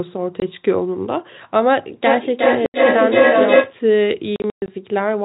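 At 0.40 s, a 20 ms hole opens in the speech. This is packet loss filled with silence. A lost packet was replaced by nothing, so the gap has hard edges. The same fault returns from 2.66 to 2.74 s. That 80 ms hole fits four 20 ms packets in a row. From 4.36 to 4.68 s, gaps scatter across 320 ms, the longest lasting 120 ms, and the sound stutters.

From 2.06 to 3.78 s, a feedback howl rises near 500 Hz. Sound leaks from a loudspeaker back into a microphone on the same call. Each trip adds gain. The loop repeats roughly every 400 ms, and the howl peaks about 5 dB above the speech.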